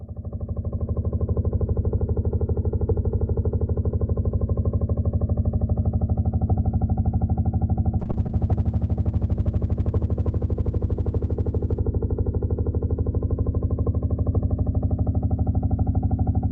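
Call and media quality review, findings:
Call bitrate drop, 8.01 to 14.35 s. Sound turns coarse and dull, highs gone. Encoder starved, consistent with roughly 128 down to 15 kbps. Worst stretch lasts about 3.3 s.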